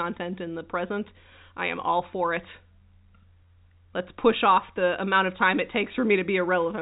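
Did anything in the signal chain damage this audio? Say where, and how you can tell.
No, the signal chain left this speech undamaged.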